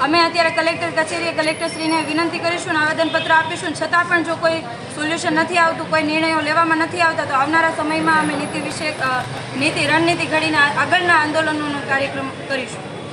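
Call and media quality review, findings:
Train of clicks, 8.72–10.63 s: about twenty similar pulses, irregular spacing, roughly 9.5 per s, peaking about 5 dB above signal. Likely nearby interference or a faulty connection or power supply.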